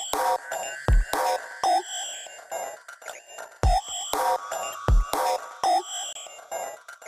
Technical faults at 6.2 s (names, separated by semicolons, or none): corrupt frame decoded